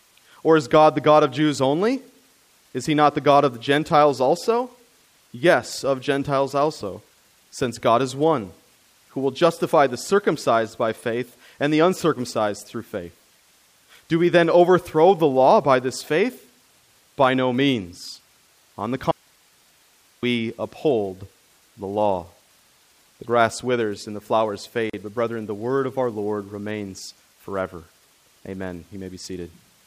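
A speech recording with two faults. The signal feed was likely lost for about 1.1 s while the path after the break stayed live, causing an audio dropout to a faint residue from 19.11 to 20.23 s. The speech cuts out abruptly, leaving only hiss about 35 dB down, then snaps back on "uphold the law". Separately encoded pieces were joined untrimmed, leaving the encoder's start delay and last-frame padding in place. The result is a gap at a join of encoded pieces: a 37 ms gap with smeared edges between "withers and the flowers" and "but brethren the word", from 24.90 to 24.93 s.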